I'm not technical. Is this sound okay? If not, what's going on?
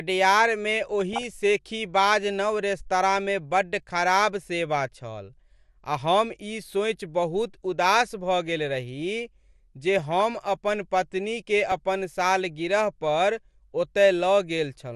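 No. MP2 compression, throughout: the speech sounds dull and plainly gurgly, likely because this digital radio format discarded the upper frequency bands and stored what remained only roughly.

DAB burbling, at 0.92 to 1.27 s (just before "शेखीबाज नव रेस्तराँमे बड्ड"), at 9.95 to 10.20 s (just before "अपन पत्नीकेँ अपन सालगिरह") and at 11.72 s (between "अपन पत्नीकेँ" and "अपन सालगिरह पर"): weak reception let data errors slip through, so slices of the sound briefly blip with noise.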